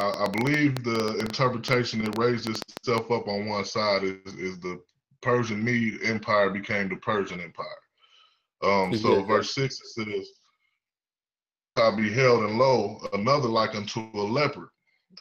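Something in the chain, likely interference from nearby equipment or a faulty connection or power supply, injects a train of clicks from 0.01 s to 2.99 s. The pulses arrive at about 8 per second but unevenly spaced, around thirty in all, each much the same shape and peaking roughly 15 dB above the sound. The result is an erratic ticking and popping laid over the opening three seconds, cutting through quieter moments as well as louder ones.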